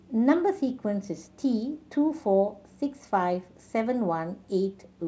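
No faults detected in the speech; the band tops out at 8 kHz, which fits a wideband call codec such as G.722 on a normal WebRTC path.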